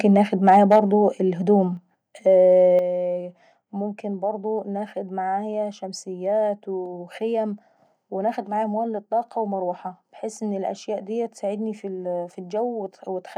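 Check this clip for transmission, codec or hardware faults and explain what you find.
Two hardware-side faults show up in this speech, both near the start.

Microphone overload, at 0.05 to 0.17 s and 0.47 to 0.79 s: input gain was likely set too high, so peaks clipped at the converter. The tops are flattened by about 1 dB, then about 4 dB, adding a harsh crackle, stronger in the second stretch.

Microphone volume stepped down, at 0.76 s and 2.79 s: software likely cut input gain in single steps after the overload. Level drops abruptly, by about 2 dB, then about 7 dB.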